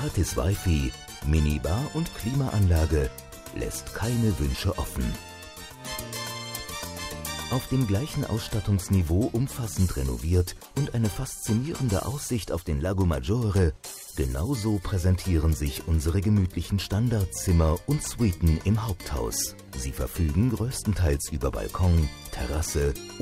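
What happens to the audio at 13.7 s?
Nothing goes wrong at 13.7 s; the audio there is intact, with no dropout, click or other fault.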